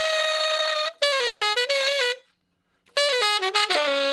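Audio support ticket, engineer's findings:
Fading buzz at 1.27–1.44 s, then audio resumes intact; call audio freeze, likely packets delayed and jitter buffer emptied, 140 ms gap inserted, nothing lost.

Brief smear at 1.53–1.57 s; short concealed packet loss, about 40 ms missing, decoder extended prior sound, then blended back, delay reduced by roughly 30 ms.

Drawn-out audio at 2.08–2.36 s, same pitch, 88% speed; jitter buffer slow-down, repeated pitch periods adding 40 ms of reserve. Opus coding noise throughout, high end consistent with a 12 kHz bandwidth.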